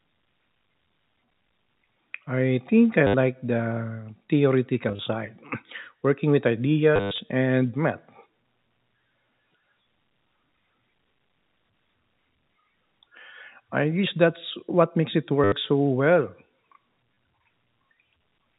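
Packet loss with the last packet repeated hits at 3.07–3.14, 4.89–4.99, 6.96–7.18 (the worst), 15.44–15.52 and 17.14–17.17 s. The last good packet gets replayed in place of the dropped ones, so you hear robotic stutters with a buzz around 100 Hz, which fits 10 ms packets.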